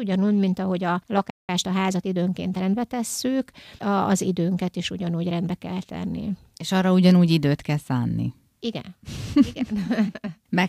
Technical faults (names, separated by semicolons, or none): playback stall; time-compressed catch-up